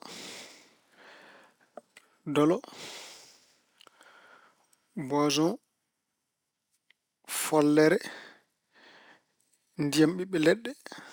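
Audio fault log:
throughout: imaging from linear upsampling, a dulled top and faint metallic shimmer on sibilants, as straight-line interpolation from what sounds like 24 kHz to 44.1 kHz leaves mirror images at 12 to 24 kHz, about 25 dB down.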